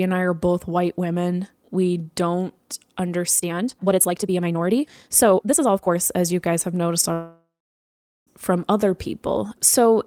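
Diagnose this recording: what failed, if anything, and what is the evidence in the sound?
From 3.34 to 5.98 s the speech rushes ahead about 1.75 times faster, with unchanged pitch. This is likely a time-stretched section, where processing dropped short pieces to shorten the audio.

At 7.13 s the sound smears into a fading buzz, then goes silent for about 0.8 s, and resumes at 8.29 s with roughly 1.1 s missing. This is likely a long network dropout.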